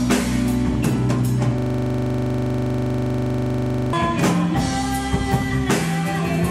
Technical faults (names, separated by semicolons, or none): system hang loop